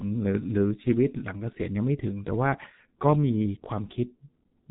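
Across the whole clip the speech sounds muffled and hoarse, with smeared consonants and nothing above 3.9 kHz. This is heavy G.723.1 codec damage. Its slow-updating voice model and 30 ms frames blur fine detail, which fits a bitrate around 6.3 kbit/s.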